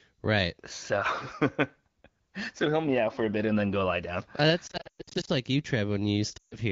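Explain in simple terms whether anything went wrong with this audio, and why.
Lost AMR speech frames, from 4.67 to 5.30 s just before "like you", and again from 6.38 to 6.58 s. Radio errors corrupted short slices of the phone call's speech. The receiving phone then guessed each missing slice by repeating the last good sound more and more quietly. In the first spot the gaps are scattered, the longest about 0.12 s, so the voice warbles and drops out. The second gap lasts about 0.14 s and fades briefly toward silence.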